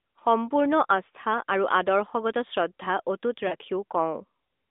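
Lost AMR speech frames at 3.48 to 3.55 s made the decoder repeat its last good pitch and vocal-tract settings at falling gain, so the speech briefly smears and dips.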